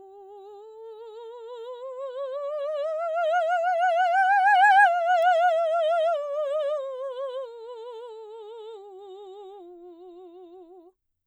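A music clip with a single bit error spike at 5.23 s: one sample jumps to about -22 dBFS and snaps back, giving a broadband tick unrelated to the music, unlike a dropout's gap or crackle's repeats.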